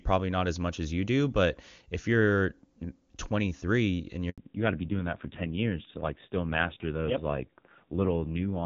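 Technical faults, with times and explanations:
4.30 to 4.38 s, handover gap: the call is passed from one network to another, and for about 80 ms no speech frames reach the decoder, so the sound fades out within a few tens of milliseconds and stays silent until the new link takes over. Whatever was said in that moment is gone. On a waveform this shows as a short flat stretch with a brief taper into it; a spectrogram shows a narrow vertical band empty across all frequencies.
4.38 s to the end, fallback to narrowband: after the gap the call resumes on AMR-NB at 5.9 kbit/s instead of the AMR-WB at 23.85 kbit/s heard before, whose sound up to this point is clean with little or no coding damage. Nothing above 4 kHz survives, so the speech turns duller and muffled, and the low bitrate adds a rough, buzzy edge. A spectrogram shows energy stopping abruptly at a flat ceiling near 4 kHz from this point on.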